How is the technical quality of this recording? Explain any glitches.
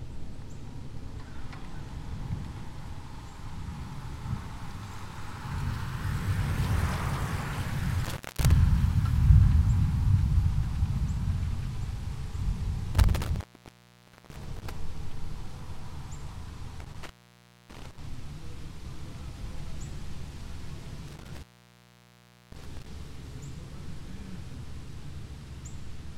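The recording has a recurring intermittent contact fault: dropouts at 8.05–8.51 s, 12.95–14.75 s, 16.80–17.98 s and 21.07–22.86 s, with the line open for about 0.23, 0.89, 0.60 and 1.09 s. A loose plug or cable briefly breaks the connection, so the sound vanishes behind a crackle at each edge, leaving faint hiss until contact returns.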